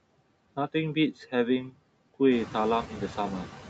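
Noise suppressor artifacts run through the whole speech clip. Frame by frame, the suppressor pulls down each frequency band it judges to be steady background noise, by about 17 dB. The floor therefore drops away in the gaps between words and swells back up underneath them, and what remains can warble or flutter. Around two and a half seconds the room noise rises by about 11 dB, giving the suppressor more to strip out, while the call's top end stops at 8 kHz.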